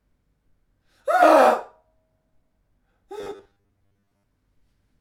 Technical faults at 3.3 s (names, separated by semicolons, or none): robotic sound from repeated short buffers